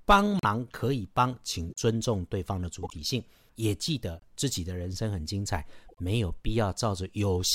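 Corrupt frame decoded at 0.39–0.45, 1.68–1.78, 2.83–2.94, 4.17–4.23 and 5.89–6.00 s: damaged compressed frames, a few at a time, were played regardless, misplacing energy in frequency. Each is a short chirp or noise burst, loudest first (about -15 dBFS), fainter later.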